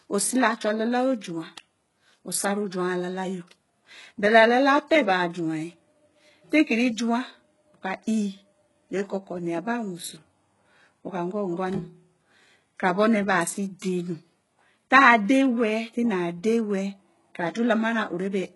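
From start to finish, the speech's treble sounds synthetic, gritty and metallic, with nothing above 11.5 kHz. The likely cause is heavy HE-AAC compression rebuilding the highs from copied lower bands, which fits a bitrate near 12 kbps.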